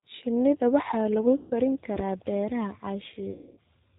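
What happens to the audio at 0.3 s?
At 0.3 s the speech carries G.729 codec damage, present across the whole clip rather than starting there. The codec rebuilds each 10 ms frame from a vocal tract filter, a pitch predictor and sparse pulses, which fits an 8 kbit/s G.729A stream. Nothing above 4 kHz survives, and the speech sounds plainly rough and synthetic.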